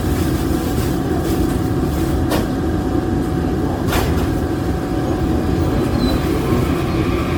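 Generation loss runs through the whole clip, start to finish. The sound is swirly and hollow, with smeared transients and blurred attacks, and nothing is present above about 19.9 kHz. This is likely the result of repeated MP3 decoding and re-encoding, perhaps around ten passes. Each pass re-quantises on a shifted frame grid, so noise and spectral gaps accumulate well beyond what the 96 kbit/s rate alone would produce.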